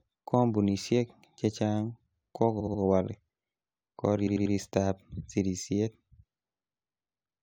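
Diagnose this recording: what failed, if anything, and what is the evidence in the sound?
Repeated frames at the codec or storage stage: a run of compressed frames was written again, so a 70 ms block replays three extra times from 2.59 to 2.80 s, and a 93 ms block likewise from 4.26 to 4.54 s. This is heard as a stutter. A spectrogram shows identical slices tiled back to back.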